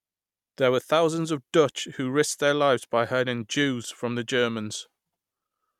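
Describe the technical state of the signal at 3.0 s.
Nothing is wrong with the signal at 3.0 s; the speech there comes through intact, with no dropout, click, distortion or other fault present at that point.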